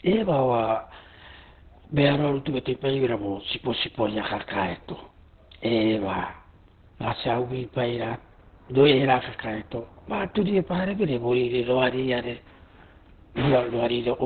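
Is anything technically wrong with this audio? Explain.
Yes, the whole recording carries heavy Opus compression damage, start to finish. Nothing comes through above about 4.3 kHz, so the speech sounds boxed-in, muffled and a bit hoarse, like an old phone line. That narrowband, husky quality is likely Opus running in its SILK speech mode at a very low rate, which fits something around 12 kbps. At that rate the encoder keeps the basic shape of the voice but discards the upper band entirely and coarsens what it keeps.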